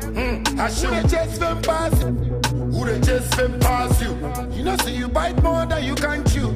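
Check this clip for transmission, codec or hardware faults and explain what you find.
There's one fault, at 2.02 s: damaged data in a compressed stream. A patch of the coded data there is corrupt, so the decoder misreads those frames, loses sync and hunts for the next valid header. You hear it as a chirp, squawk, click or short hole.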